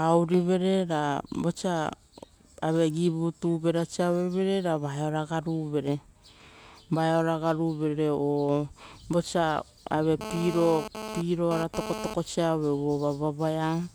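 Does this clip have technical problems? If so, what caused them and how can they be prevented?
Yes. From 10.21 to 12.14 s, just after "o vosa", GSM phone buzz appears: a nearby 2G phone transmitting data bursts 217 times a second, rectified by the audio circuit into a raspy buzz about 9 dB below the speech. A spectrogram shows evenly spaced harmonic lines at multiples of 217 Hz, and the waveform shows regular pulse trains. Keeping phones away from microphones and cables, or in airplane mode, prevents it.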